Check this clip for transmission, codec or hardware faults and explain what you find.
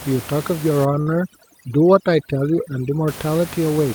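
Two faults are present in this speech clip.

Overdone noise removal, 0.85 to 3.08 s: an over-aggressive suppressor gates bands near its noise estimate, leaving near-silent gaps with twinkling specks.

Short stall from a late packet, 1.01 to 1.09 s: the jitter buffer ran dry, so the last sound was stretched about 53 ms until the packet arrived. Nothing is lost, but the sound is held too long.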